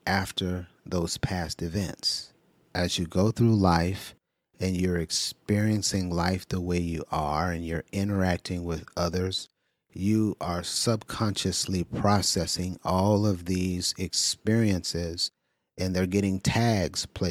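A short bit of recorded speech, and nothing technically wrong turns up anywhere in it.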